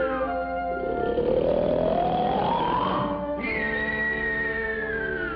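Drift correction step, 1.46 to 2.60 s: speed jumps 5.75% and pitch about 97 cents before snapping back, likely a clock-matching resampler correcting its buffer.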